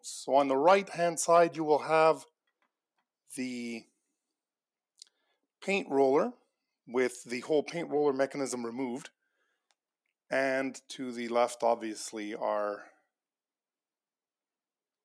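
No technical faults can be heard anywhere in this audio.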